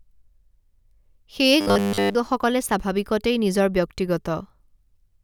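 Robotic sound from repeated short buffers runs from 1.61 to 2.15 s. A rigid 100 Hz buzz replaces the natural voice, which fits a roughly 10 ms fragment looping throughout. The likely cause is new audio arriving too slowly, so essentially all of this stretch is filled with repeats while the real speech is skipped.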